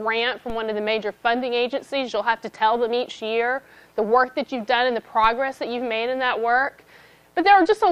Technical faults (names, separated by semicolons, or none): DC step